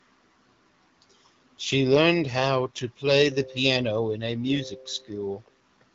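Nothing stood out on listening to this speech recording, which comes through an AMR wideband (HD Voice) link at 12.65 kbit/s.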